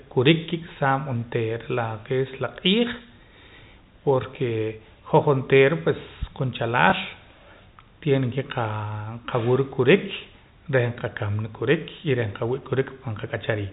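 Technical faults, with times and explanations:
6.9 s: packet loss with last packet repeated. About 20 ms is replaced by a copy of the preceding stretch, which fits one lost 20 ms packet. A single repeat like this sounds like a small blip. The waveform shows a duplicated segment with step joins. The spectrogram shows a thin vertical line, capped at 4 kHz by the G.711 telephone coding.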